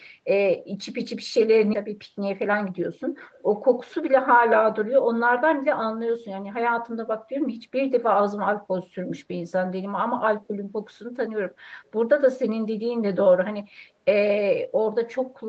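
At 1.73 s there is a skip ahead: about a second of speech never reaches playback, and the speech on either side of the jump is spliced together with no gap and no fill. The delay falls by the same amount as the stretch is dropped.

From 1.84 to 2.98 s a jitter buffer speed-up follows, as the receiver trims the backlog by cutting short pitch-period pieces over and over. Speech runs at about 109% with unchanged pitch, sounding hurried, and roughly a tenth of a second is removed. Throughout, the Opus call path caps the audio at 8 kHz.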